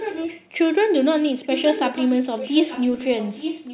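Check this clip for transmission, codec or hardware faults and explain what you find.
One fault is present, an echo leak, heard from 0.0 to 0.48 s, 1.43 to 2.2 s and 2.38 to 3.74 s. A copy of the speech returns 870 ms late, roughly ten decibels quieter, likely from a loudspeaker's echo canceller letting sound through. A spectrogram shows faint repeated harmonic patterns trailing the speech in those spans.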